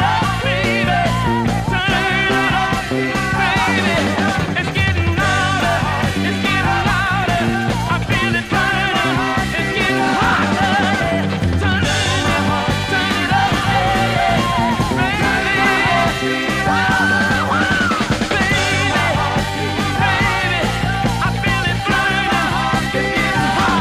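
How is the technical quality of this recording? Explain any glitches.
One glitch stands out. From 13.48 to 16.04 s a doubled audio track appears: a second, slightly quieter copy, about 5 dB down, trails the original by roughly a third of a second, dry and unchanged, cutting in and out abruptly. Likely a second, slower capture path mixed alongside the first.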